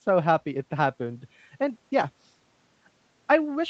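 Nothing to flag here: the speech sounds just as a normal call would, with the top end stopping at about 8 kHz in the way you'd expect from an Opus-style call link, and there are no faults to report.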